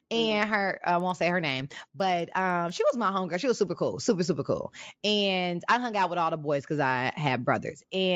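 Speech with a steady ticking from 0.9 to 2.9 s, ten clicks per second riding on the signal. The resampler restarted on every block: each 100 ms chunk, likely converted from 16 kHz to 48 kHz, was processed alone, so every block edge carries a small discontinuity.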